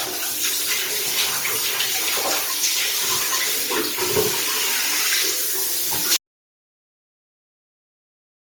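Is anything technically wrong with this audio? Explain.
Yes, two faults. Throughout, generation loss: the sound was likely re-encoded several times with a lossy codec, fitting about five Opus passes at 48 kbit/s, leaving it swirly, hollow and smeared with blurred attacks. From 6.17 s to the end, an audio dropout to silence: the input was likely lost while recording continued, so the sound cuts off abruptly into total silence with no room tone.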